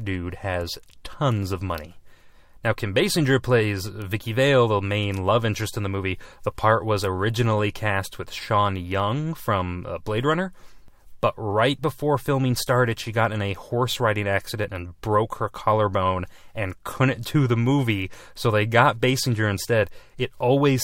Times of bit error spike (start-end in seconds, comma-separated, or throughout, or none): 4.02